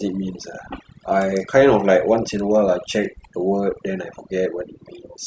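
A speech recording with overdone noise removal throughout: the background drops and breaks up into twinkling specks. A noise reducer set too strong is shutting off individual frequency bands near its noise estimate, taking quieter voice detail with them.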